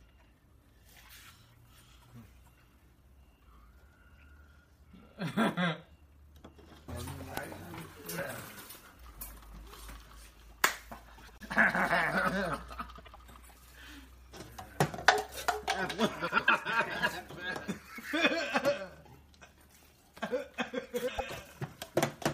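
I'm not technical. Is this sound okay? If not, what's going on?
No. The audio has frames out of order in four places: 11.18 to 11.42 s, 12.98 to 13.16 s, 16.27 to 16.50 s, and 21.08 to 21.31 s. Each time, two tiny neighbouring chunks of sound, about a tenth of a second each, play in swapped order. You hear a quick garbled flutter. Unlike a dropout or skip, nothing is missing and no time is lost. The same sound is just briefly rearranged.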